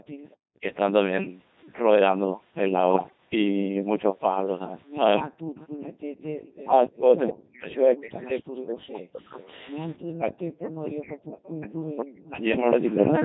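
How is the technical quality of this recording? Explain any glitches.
Poor, with three problems: heavy vocoder coding throughout, a burst of radio bit errors near 3 seconds, and an echo from 5.6 s to the end.

Codec 2 vocoder, throughout: the speech was carried at 2.4 kbit/s, sending only pitch, voicing, level and a rough spectral shape, and the decoder rebuilt it from sine waves. The original waveform is lost, so the voice sounds heavily robotic and buzzy.

Bit errors on digital voice radio, 2.94 to 3.18 s: corrupted bits, around 5 percent of them, reached the decoder, where each bit sets a whole frame's parameters. The damage spans about nine frames, so pitch, loudness and tone lurch, giving a warbling, bleepy burst.

Echo leak, 5.6 s to the end: the far end likely played the call on a loudspeaker, and its echo canceller did not fully remove what its microphone picked up. A copy of the voice trails about 0.28 s behind, only a little quieter than the speech itself. 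The call's microphone processing also trims the lowest bass, which is normal and not a fault.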